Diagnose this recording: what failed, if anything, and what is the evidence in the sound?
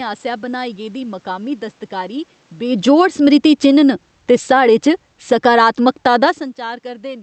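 Automatic gain falling in the call processing: from 2.62 s to 6.23 s the level eases down by about 8 dB. The room noise sinks right along with the speech, so it's the gain control backing off, not the talker shifting around 2.5 s.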